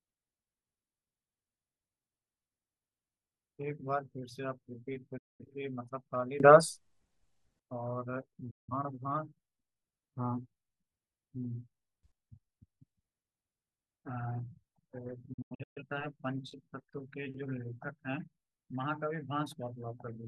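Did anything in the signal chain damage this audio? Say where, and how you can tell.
Yes. Digital broadcast dropout at the receiver: the speech fades out within about 8 ms and goes silent at 5.18–5.45 s, 8.50–8.73 s, and in scattered holes over 15.33–15.82 s, as corrupted frames are muted.

Sudden gain jumps: speech and background noise step up together by about 16 to 17 dB at 6.40–7.60 s and 12.03–12.12 s, likely from an unramped digital gain change in processing.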